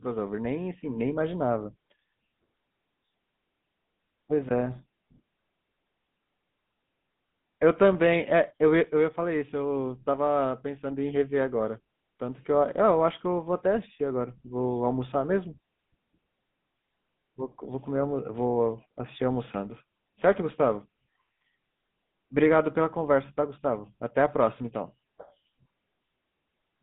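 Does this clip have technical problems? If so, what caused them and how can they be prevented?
Yes. GSM full-rate codec damage runs through the whole clip. The band stops near 150 Hz and 3.7 kHz. The speech has a buzzy, gravelly edge, since the excitation is coarsely pulse-coded, which fits a 13 kbps codec. Prevent it by recording locally or using a wideband codec.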